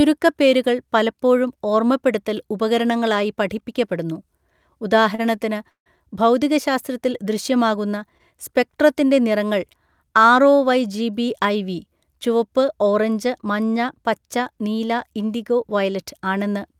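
At 5.15 to 5.20 s there is a short stall from a late packet. A packet was not there when it was due, so the jitter buffer ran dry and the receiver stretched the last sound by about 27 ms until the data arrived, then carried on from the same point. Nothing is lost, but the speech is pushed 27 ms later. It sounds like a syllable held a touch too long, with a faint buzz. On a spectrogram the harmonics run flat and smeared for that instant. The waveform shows a brief repeating, slightly dipping stretch.

From 5.70 to 5.88 s comes a call audio freeze, just before "ഭൗതികശാസ്ത്രത്തിൽ ദൃശ്യമാകുന്ന". The likely cause is packets held up in transit, leaving the buffer empty. The receiver filled about 157 ms. The last sound trails off as a fading buzz, then about 110 ms of silence follows before the speech resumes where it stopped, now 157 ms later. On a spectrogram a decaying smear gives way to a blank gap. 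In the waveform the envelope collapses to a flat line.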